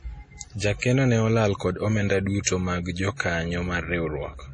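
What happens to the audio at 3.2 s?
At 3.17 to 3.20 s a sharp onset in the speech is preceded by a brief hiss lasting about 33 ms, a clear case of pre-echo. The attack falls late within a transform block, and the quantisation noise sized for that loud moment spreads across the whole block, including the quiet stretch just before it. The result is a smear of noise ahead of the attack, which loses its crispness and sounds softened.

Underneath this, and at every other point in the clip, the sound is band-limited with nothing above 10.4 kHz. It carries heavy codec damage: a watery, swirling texture, metallic chirps on sibilants, and smeared transients. That combination points to MP3 compression, likely at a low bitrate in the region of 32 kbps. With so few bits, the encoder cuts the treble at a fixed frequency and drops weak spectral lines that flicker on and off from frame to frame.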